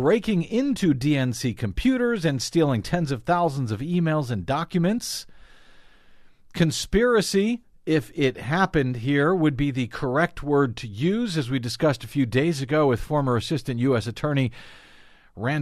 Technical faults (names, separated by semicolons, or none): none